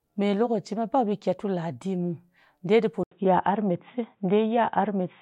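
At 3.03 s there's an 80 ms gap, then the speech goes dull and band-limited below 3.8 kHz through the end, with a noticeable level jump, likely an input switched to a poorer device.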